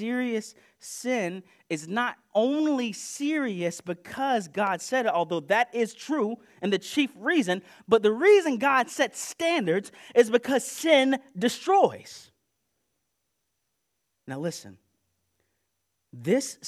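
No technical faults can be heard anywhere in the speech recording.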